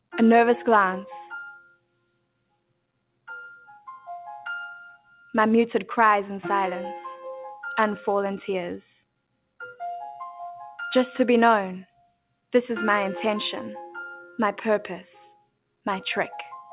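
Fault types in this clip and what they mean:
Sound cut by the noise suppressor: The suppressor misjudged parts of the wanted sound as background noise and pulled their level down harder than the surrounding audio, by up to about 22 dB. Sustained and decaying passages sink or have their tails clipped short. This happens at 1.58–3.27 s (the longest, well over a second of affected sound), 9.06–9.58 s, 11.86–12.51 s and 15.34–15.86 s, all within audio already band-limited to 4 kHz, which fits a G.711 call path.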